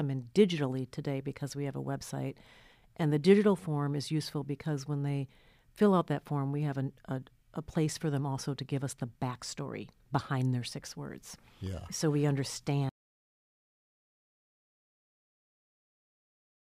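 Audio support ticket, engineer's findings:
Repeated buffer at 11.31 s: short buzzy click mid-speech, one small block played three extra times back to back with hard joins. The size fits a 256-sample buffer, around 5.33 ms each. Playback or driver side missed its deadline and replayed the last block, so about 15 ms of speech got skipped.

Audio dropout to silence from 12.89 s through the end: speech cuts out mid-flow and never returns, leaving silence with no room tone for the last 3.9 s. Input path went away while the recorder kept writing, likely a disconnected device or a mute upstream. Everything after the cut is lost.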